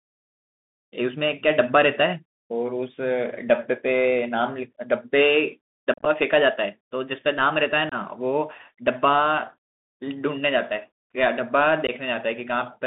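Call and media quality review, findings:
Speech band-limited to 150 Hz–3.6 kHz throughout, with scratchy sibilants and granular hiss. Probable component: Bluetooth CVSD headset codec, fitting a 64 kbps one-bit delta link whose adaptive step lags loud highs. Spectrogram: hard ceiling at 3.6 kHz with a noise floor speckled across the band.

Unconcealed Bluetooth headset packet loss at 5.94–6.08 s: about 90 ms missing across 120 ms, longest gap 37.5 ms, consistent with roughly ten lost packets. Smaller holes at 7.89–7.94 s (22.5 ms) and 11.87–11.90 s (15 ms). Abrupt dropouts. Waveform: flat notches with square edges. Spectrogram: full-height vertical blank stripes.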